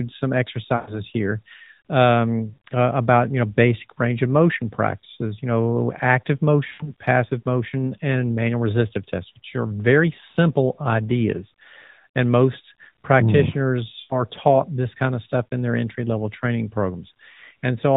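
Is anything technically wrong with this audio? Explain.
Yes. The speech, carried through the AMR narrowband mobile codec (nothing above 4 kHz, with light coding texture that fits its 12.2 kbps mode), has lost AMR speech frames at 0.76 to 0.93 s, 2.50 to 2.56 s, 6.68 to 6.93 s and 14.00 to 14.15 s. Each gap points to a run of four to six corrupted 20 ms frames. The decoder repeats the last good pitch and vocal-tract settings at falling level, so the sound smears out, then fades quietly before returning rough. That gradual fade separates it from a hard dropout to silence.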